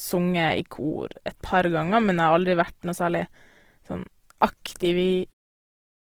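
Throughout the speech, a grainy, rough texture sits on the voice, with a noisy fizz instead of clean harmonics. This plainly audible damage is most likely Opus compression in its music-style CELT mode at a very low rate. The sound points to roughly 16 kbps with fullband kept. When bits run short, each band's energy is preserved but its detail is replaced by folded or noise-filled content. On a spectrogram, harmonic lines look smeared and speckled with noise, yet the upper bands remain filled rather than showing holes. The level fades smoothly out near the end, from about 5.3 s to around five and a half seconds.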